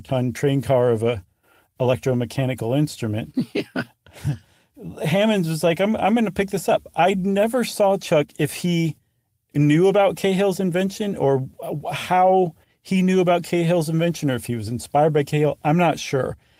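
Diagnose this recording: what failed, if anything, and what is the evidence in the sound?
Nothing in this speech recording stood out as a fault on listening.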